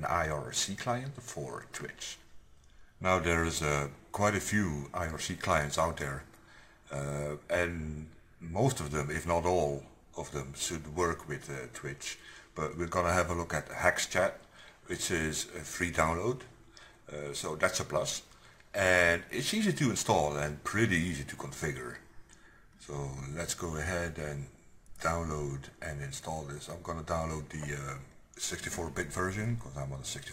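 Nothing faulty turns up anywhere in the audio.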